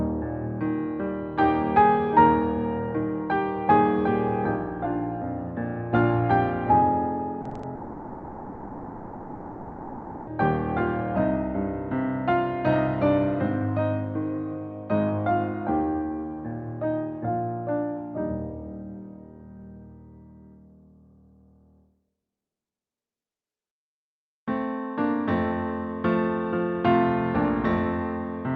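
Repeated packet loss (robotic sound) occurs from 7.41 to 7.65 s. Over this quarter-second, packets keep going missing in quick succession, with the longest hole about 40 ms. Each hole is patched by extending the preceding sound, and about half the span ends up as this filler rather than real audio. The result is a choppy, robotic stutter with fragments missing.

From 7.75 to 10.29 s, nothing new is heard for about 2.5 s. The last sound is stretched and carried on by the receiver, decaying into a buzzy, hissy continuation that never drops to true silence. The original audio for this stretch is lost, and the sound resumes at 10.29 s with that part gone. This points to a likely long network dropout.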